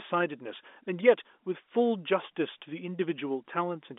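Nothing goes wrong anywhere in this speech, which comes through the usual narrow band of a G.711 phone line without a single technical fault to point to.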